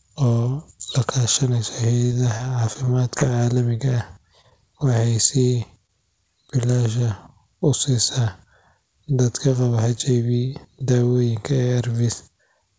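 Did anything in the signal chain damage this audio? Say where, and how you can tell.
Yes. Several network-stage faults hit this speech clip.

Repeated packet loss (robotic sound) runs from 2.06 to 3.23 s, just after "la kaashaneysa". Six gaps, the longest 36 ms, are patched by extending the previous sound. Because the gaps cluster, the result is a sustained choppiness rather than isolated blips.

Short concealed packet loss occurs at 3.77–3.81, 4.42–4.46 and 4.50–4.53 s. About 20 ms goes missing each time, heard as a brief smear or wobble. These are single, separated holes, not a continuous robotic stretch.

A jitter buffer slow-down runs from 3.85 to 4.20 s. The audio plays at about 88% speed, adding 49 ms, while the pitch stays unchanged. That rules out a clock or tape speed error.

A short stall from a late packet occurs at 5.87–5.91 s. One sound is held about 23 ms too long, then continues from where it stopped. 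Nothing is lost, which distinguishes it from concealed packet loss.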